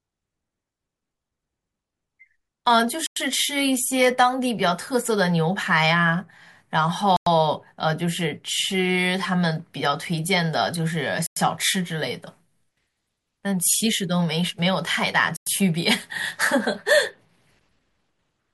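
At 3.06, 7.16, 11.26 and 15.36 s, a gap between chunks inserts 100 ms of hard-edged silence at each 4-second chunk join. Unlike a dropout, the speech resumes exactly where it paused.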